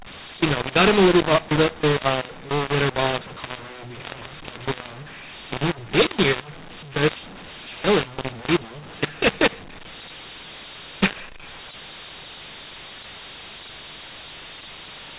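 From start to finish, audio encoded with G.711 mu-law is being decoded as if it were A-law, so mu-law and A-law are mixed up. Each 8-bit code is mapped onto the wrong logarithmic curve, scrambling the sample levels. Some come out too loud, others too quiet, and near-silent samples are pushed well above zero. The speech sounds harsh and distorted, with gaps between phrases filled by noise, all within a band that stops at 4 kHz, consistent with telephone coding.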